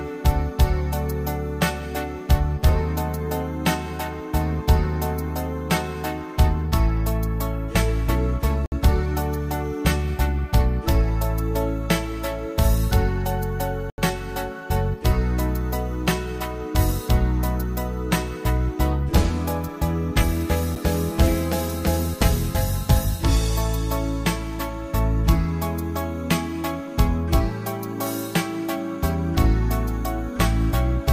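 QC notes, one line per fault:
8.66–8.72 s, block of digital silence: the sound drops to silence for 60 ms. The hard cut in and out leaves a short hole.
13.90–13.98 s, block of digital silence: an 80 ms run of zeroed samples. The audio stops dead and returns with no fade, so it is heard as a gap.
20.75 s, block of digital silence: only about 7 ms is zeroed. That is too brief to hear as a gap, so it comes across as a tick or dip.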